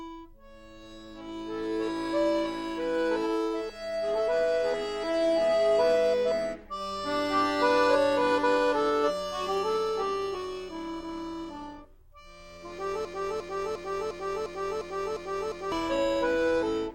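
At 13.05 s a broken-record loop begins: a fragment of about 0.35 s repeats exactly, back to back, eight times until 15.72 s. The likely cause is a stalled player or stream resending its last buffered fragment, so the intervening audio is lost.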